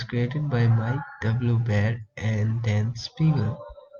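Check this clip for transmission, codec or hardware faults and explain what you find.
Nothing in the speech signal points to a transmission, codec or hardware fault; it stays continuous and even throughout, with no dropouts, distortion or level disturbances to report.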